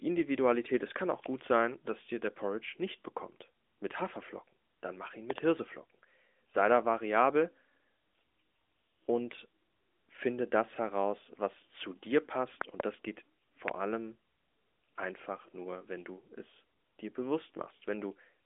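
Sharp double loud pops break through at 5.30 to 5.40 s, right after "mach ihn", and again at 12.61 to 12.82 s between "heraus was zu dir" and "das geht". A single pop follows at 13.68 to 13.70 s, just after "das geht". They peak about 15 dB, then about 20 dB, above the speech, which carries on beneath them. The likely cause is a voltage glitch, such as a connector or static discharge, in a narrowband AMR phone recording.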